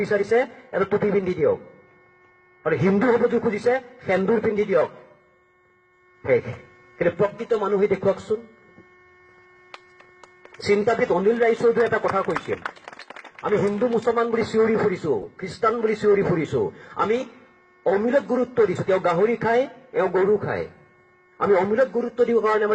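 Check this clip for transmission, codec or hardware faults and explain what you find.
Three corrupt frame decoded glitches, at 4.65–4.68 s, 12.35–12.40 s and 15.18–15.27 s. Damaged compressed frames were played anyway, spraying misplaced energy as brief chirps, squeaks, blips or bursts of noise; the middle one is loudest, the last longest.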